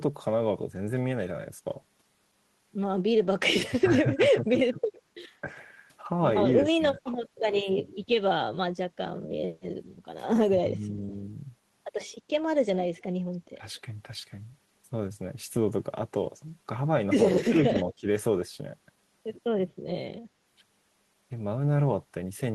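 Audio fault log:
3.81–5.48 s, 6.76–7.01, 10.58–11.14, 13.58–13.63, 17.48–18.08 s: speech suppressed in double talk. The speech dips, deepest about 20 dB near 4 s, likely because an echo canceller ducked both talkers at once. Waveform shows sudden envelope notches.
12.99–13.8 s, 17.90–17.94 s: echo leak. A delayed copy 224 ms behind the speech, very faint first and much louder second, likely escaped echo cancellation. The spectrogram shows faint shifted repeats of the harmonics.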